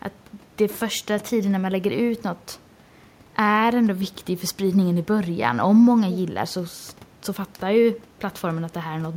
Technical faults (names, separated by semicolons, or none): none